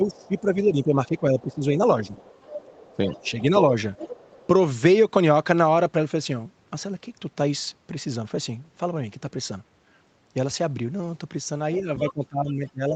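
Speech suppressed in double talk from 0.00 to 2.17 s: the speech dips by up to about 15 dB for roughly one and a half seconds, likely because the echo canceller turned everything down while both sides talked. Over the same stretch, the other side's voice leaks through at 0.06 to 0.41 s and 1.40 to 1.55 s as faint scraps about 30 dB below the speech, likely residual loudspeaker echo the canceller missed. The leak grows louder from 2.15 to 3.58 s, about 20 dB below the speech. Within it, a brief dip of about 5 dB at 2.95 to 2.99 s is another double-talk suppression. A further leak at 3.94 to 4.47 s is stronger still, about 15 dB below the speech. From 11.81 to 12.95 s, speech is suppressed in double talk again, dropping by up to about 20 dB.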